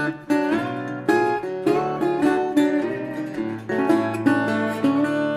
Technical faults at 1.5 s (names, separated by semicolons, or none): none